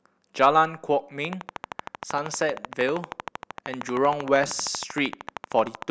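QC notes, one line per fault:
1.25 to 5.83 s, train of clicks. A steady ticking runs over the speech for most of the clip, at about 12.9 clicks per second with even spacing, around seventy clicks in all. Each click has much the same shape. The peaks stand roughly 10 dB above the speech, so they cut through clearly, and they keep going in the pauses. The regular pulse points to a likely cause outside the sound itself, such as interference from nearby equipment or a faulty connection or power supply.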